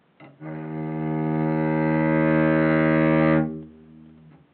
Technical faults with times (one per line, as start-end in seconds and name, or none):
none